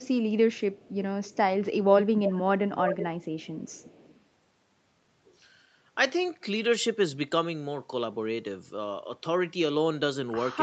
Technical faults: echo leak

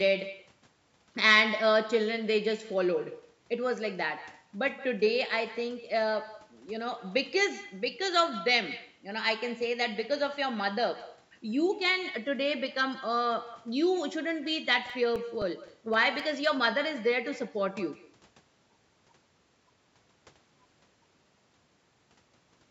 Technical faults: echo with no canceller; CD scratch ticks

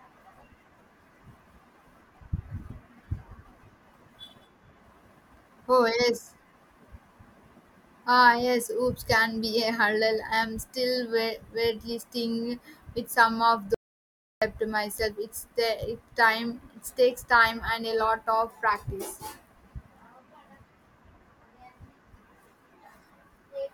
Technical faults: audio dropout to silence

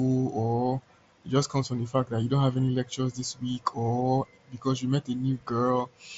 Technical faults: none

